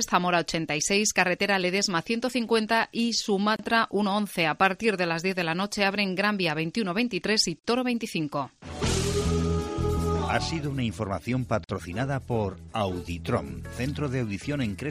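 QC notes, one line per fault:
3.56–3.59 s, 7.59–7.64 s, 11.64–11.69 s: gap at a join of encoded pieces. The sound drops out briefly every 4 s, first for 32 ms, then twice for 49 ms, and resumes where it stopped. Separately encoded pieces were joined with each run's start delay and end padding left in.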